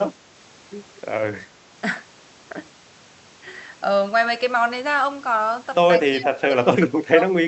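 From 6.07 to 7.24 s the speech ducks and breaks up, dropping by roughly 25 dB at its worst, with about a second affected overall. That's likely speech suppressed in double talk: the echo canceller mistook this talker for far-end echo and clamped down on both.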